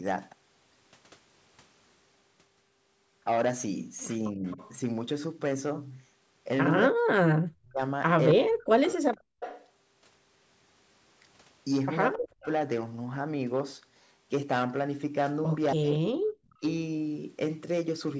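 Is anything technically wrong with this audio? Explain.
Yes. The speech drops out in places, a delayed copy of it comes back, and the room sound briefly vanishes, all signs of an echo canceller struggling during a two-way call.

Speech suppressed in double talk happens from 4.32 to 8.87 s, again from 12.15 to 12.46 s, and more mildly from 15.73 to 16.63 s. The voice is turned down while the far side is talking. In the first stretch the cuts total roughly a second and a half and fall by around 40 dB. The last stretch dips by only about 20 dB. The likely cause is that the canceller could not tell the near talker from loudspeaker echo and turned both down. Unlike the gating described below, this takes out the speech itself, not just the room sound.

Echo leak appears at 4.47 to 4.72 s as a faint scrap, about 25 dB below the speech. From 8.62 to 12.47 s it is a longer, stronger stretch, roughly 15 dB down. 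From 15.94 to 16.55 s it is weaker still, around 35 dB down. Each time the copy trails the voice by 263 ms. This is likely loudspeaker sound that the canceller did not fully remove before it was sent back. It differs from reverberation because it is a distinct repeat at a fixed delay, not a smooth decay.

Background gated by the echo canceller occurs from 9.21 to 9.40 s, where the room tone drops by about 40 dB. It happens again from 16.18 to 16.32 s, this time with a shallower dip of about 15 dB. Each time the canceller clamps the microphone hard while the loudspeaker plays, then releases it. Unlike double-talk suppression, this is a brief hole in the ambient noise lasting a fraction of a second, not a chopping of the voice. The call's normal microphone processing also caps the audio at 8 kHz.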